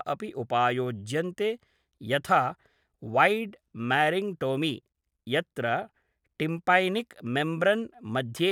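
No technical faults are audible.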